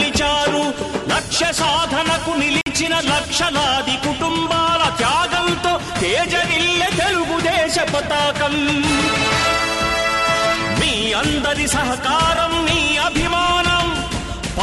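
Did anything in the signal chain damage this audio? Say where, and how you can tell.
Yes. At 2.61 s the audio drops to 50 ms of dead silence before resuming at 2.66 s, a Bluetooth stall in the wireless playback link. The likely cause is delayed packets draining the headphones' buffer. The waveform shows a flat gap, and the spectrogram a clean vertical blank band.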